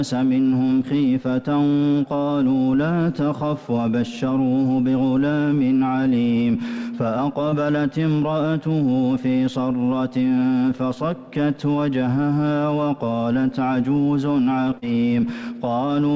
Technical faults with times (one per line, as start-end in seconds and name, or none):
7.50-7.54 short concealed packet loss
14.78-14.84 short concealed packet loss